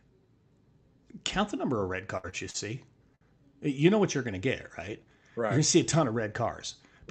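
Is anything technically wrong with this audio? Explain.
Yes, there are three kinds of network-related fault in this speech recording.

Burst of packet loss, 2.17 to 2.26 s, right after "the number of red": several consecutive packets never arrived in time. The receiver covered the hole by extending the last sound and letting it decay, so about 59 ms of concealment can be heard as a held, fading buzz or hiss. When real audio returns, roughly 60 ms of the original speech has been skipped and never comes back.

Short stalls from a late packet, at 2.29 to 2.35 s (also after "the number of red"), 2.51 to 2.57 s, and 3.15 to 3.24 s: each time, the jitter buffer emptied because the next packet had not arrived when it was due. The receiver stretched the current sound while waiting, by about 32, 37 and 60 ms respectively, then continued from the same point. Nothing is lost, but syllables hang on unnaturally, with a faint buzz or dip, and each stall pushes playback later.

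Jitter buffer speed-up, 4.93 to 5.58 s, just before "to see a ton": after those stalls the buffer had built up extra delay, so the receiver trimmed tiny pitch-period slices repeatedly to catch up, removing about 50 ms in total. Speech runs at about 108% of normal pace with its pitch unchanged, giving a slightly rushed, clipped delivery.

All of this passed through an Opus call path, and the audio's high-frequency content stops at 8 kHz.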